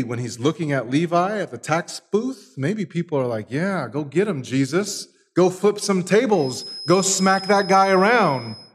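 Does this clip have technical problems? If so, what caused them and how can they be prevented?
Yes. A feedback whistle, a thin tone at 5.1 kHz well below the main sound, runs from 6.29 s to the end. It likely comes from a loudspeaker-to-microphone loop held just at the feedback threshold. Lowering monitor gain, repositioning the microphone, or notching 5.1 kHz prevents it.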